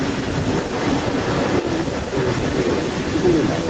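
A short speech recording carries an echo leak from start to finish. A second copy of the talker trails the original by about 210 ms and sits only a few dB below it, so a delayed repeat of the voice comes back behind it. That spacing and strength point to a far end playing the call over a loudspeaker, with its echo canceller likely failing to subtract what its microphone picked up and sending the residue back. Speech suppressed in double talk appears three times: at 0.63 to 0.71 s, 1.62 to 1.68 s, and 2.02 to 2.26 s. In each the level dips by a few dB for a brief stretch, the last being the longest. These dips fit an echo canceller that, with the echo and the talker overlapping, turned down both rather than only the echo. Everything sits below 8 kHz, consistent with a wideband Opus call path and normal call microphone filtering.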